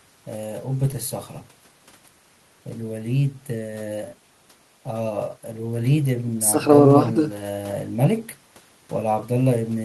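Nothing stood out on listening to this speech recording.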